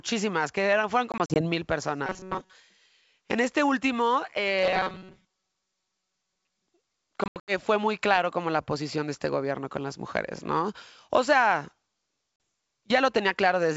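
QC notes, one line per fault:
1.12–1.42 s, 7.24–7.53 s and 12.36–12.40 s, packet loss on an ADPCM call: right after "que eran fueron", about 100 ms of audio drops out as brief silent gaps spread over 240 ms, the longest lasting 40 ms. The second event, just before "fue muy claro como", loses 180 ms over 240 ms, with a longest gap of 80 ms. At 12.36 s a single 40 ms hole appears. Each gap is hard-edged. On a waveform it shows as a flat near-silent stretch with abrupt walls, and on a spectrogram as blank vertical stripes. When the sound resumes, the decoder's predictor and step size no longer match the sender's. The restart is therefore slightly distorted, and it settles within tens of milliseconds.
2.07–2.53 s and 4.59–6.67 s, robotic sound from repeated short buffers: the second, longer run begins after "este último". Across both spans most of the audio, around seven tenths, is a loop of the same tiny slice. 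This is likely caused by late-arriving audio being padded with repeats of a buffer of roughly 5.3 ms. That loop imposes a rigid 188 Hz buzz with a metallic timbre. On a spectrogram it appears as flat, evenly spaced harmonics at multiples of 188 Hz. On the waveform it shows as identical repeating cycles.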